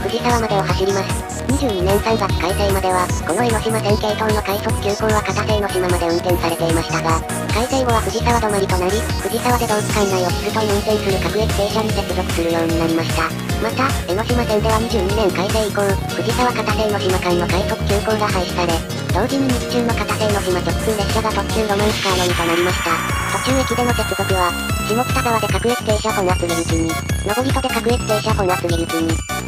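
Nothing here trips any alarms: no dropouts, glitches or other technical faults turn up anywhere in the clip.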